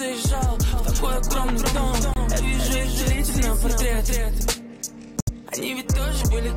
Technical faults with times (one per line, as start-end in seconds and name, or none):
0.73-4.53 doubled audio track
2.14-2.17 corrupt frame muted
5.20-5.29 corrupt frame muted